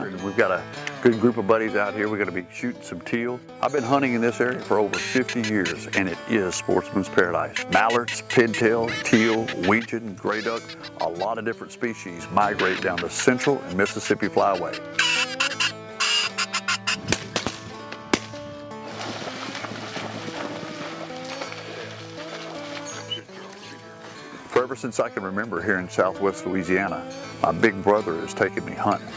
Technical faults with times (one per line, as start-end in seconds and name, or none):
2.40-3.78 one channel drops out
9.79-12.19 one channel drops out
23.20-25.57 one channel drops out